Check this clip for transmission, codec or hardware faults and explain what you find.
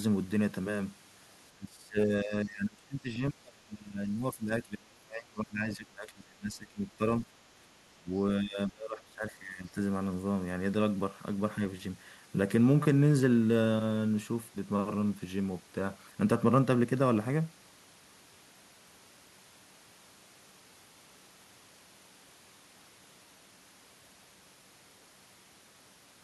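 One fault appears three times: speech suppressed in double talk. The speech sinks from 1.49 to 7.01 s, briefly at 7.95 to 8.11 s, and again from 8.39 to 9.77 s, dropping by about 25 dB at its deepest. The likely cause is an echo canceller that could not separate the near talker from loudspeaker echo while the far side spoke, so it turned both down. Packet-loss dropouts cut abruptly to silence. Here the level instead ducks over stretches lasting up to several seconds.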